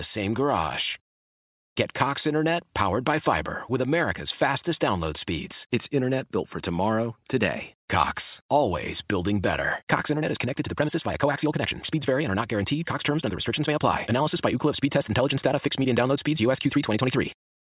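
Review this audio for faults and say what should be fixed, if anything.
Nothing here needs fixing, since the recording of speech comes across without any technical faults to flag.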